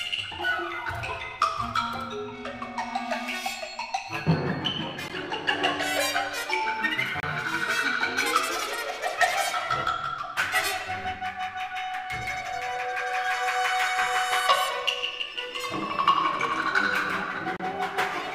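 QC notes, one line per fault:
5.08 s, 7.20–7.23 s, 17.57–17.60 s: likely Bluetooth dropout. The sound cuts to silence for 14.5 ms, then for 29 ms twice, and resumes further along as if it had kept playing. This fits one and then two late packets being discarded. The waveform shows flat gaps, and the spectrogram shows blank vertical strips across all frequencies.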